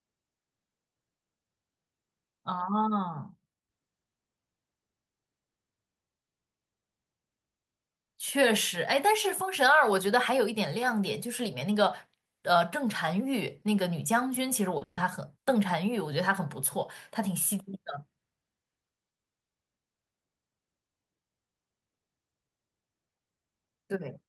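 At 14.77 s a short concealed packet loss occurs: about 40 ms of the call arrived too late for the decoder, so the receiver extended the preceding sound to cover the hole before blending back into real audio. It is heard as a brief smear in the speech, lasting only a few hundredths of a second, and a short consonant in that stretch can disappear without any obvious break.

Directly after, from 14.83 s to 14.99 s, comes a burst of packet loss. About 140 ms of audio never arrived, and the receiver kept synthesising a continuation of the last sound while attenuating it, ending in roughly 10 ms of silence. The result is a held, fading buzz or hiss, after which the speech resumes further along with that stretch missing.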